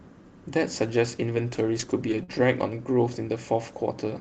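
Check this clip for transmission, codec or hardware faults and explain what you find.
Four transmission faults turn up, all in the middle of the speech, carried over a WebRTC call path whose Opus coding tops out around 8 kHz.

Lost packet rebuilt from error correction occurs three times: 1.35–1.39 s, 1.79–1.83 s and 2.07–2.11 s, each about 40 ms. The missing packets were replaced by the low-bitrate backup copies carried in the following packets, so nothing drops out. Instead, each patch sounds briefly grainy and rough. On a spectrogram these are short blocks of smeared, noisier harmonics with no gap in the waveform.

Short concealed packet loss runs from 2.23 to 2.31 s. Around 40 ms of audio never arrived, and the decoder extended the preceding sound for about 43 ms before crossfading back. It comes across as a quick smear or wobble. The waveform shows a suspiciously repetitive stretch, and the spectrogram shows frozen, blurred harmonics.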